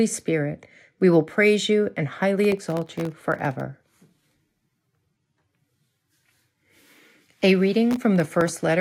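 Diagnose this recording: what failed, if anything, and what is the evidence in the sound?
The driver and buffer stage failed: the processor fell behind and missed many buffer deadlines, producing processor overload crackle from 2.40 to 3.61 s and again from 7.91 to 8.48 s. Each missed buffer left a tiny hole of silence with hard edges, and the very fine grain of the crackle fits buffers well under a millisecond long. Dozens of these dropouts in quick succession sound like gritty tearing over the speech, stopping as the load eases.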